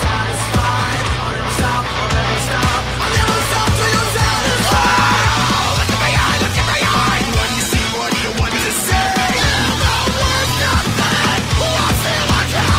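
From 6.39 to 11.44 s a call bitrate drop starves the encoder, which fits a fall from 32 to 15 kbps. For about 4.2 s the audio sounds rough, watery and muffled.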